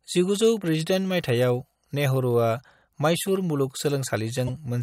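A short glitch cuts into the speech from about 4.47 to 4.49 s, lasting roughly 20 ms near the end of the recording. It is damaged data in a compressed stream: a stretch of the encoded file was wrong, with bytes lost, zeroed or overwritten. The decoder misread the frames there and lost its footing in the bitstream until it resynchronised on a following frame header, producing that brief disturbance.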